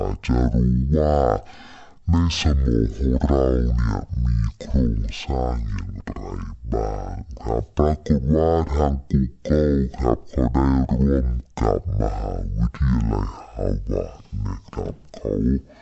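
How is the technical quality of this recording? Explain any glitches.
The recording has one fault, present throughout: a wrong sample rate. The speech plays at half speed and a full octave low, which fits 48 kHz audio played at 24 kHz without conversion. On a spectrogram, harmonics crowd downward at half their normal spacing, and the waveform looks stretched to twice its length.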